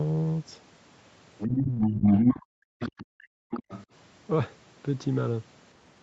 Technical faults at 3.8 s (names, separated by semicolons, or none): other side's voice leaking through